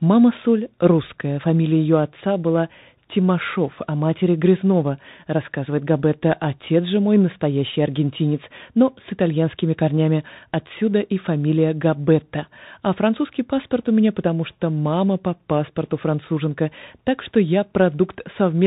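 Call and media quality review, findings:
Bluetooth CVSD headset codec, full 0–18.7 s. Headset link ran narrowband 1-bit delta modulation, consistent with 64 kbps CVSD. Nothing above 4 kHz; loud highs outrun the adaptive step and distort, s sounds scratchy, granular hiss under speech.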